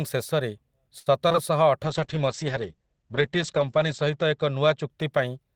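Speech clip. From 0.99 to 1.08 s there is a short stall from a late packet: the sound is held for 67 ms while the buffer waits, then resumes with nothing lost, only delayed. From 1.28 to 1.36 s, two back-to-back stretches of short concealed packet loss (about 20 ms each) smear the audio; unlike the stall, real sound is missing here and replaced by an extrapolated guess. From 1.85 s to the end, a call bitrate drop from 32 to 9 kbps, bottoming out for about 1.7 s, makes the sound coarse and watery and narrows its bandwidth from 20 kHz to 8 kHz. That lasting dullness distinguishes it from the brief glitches before it.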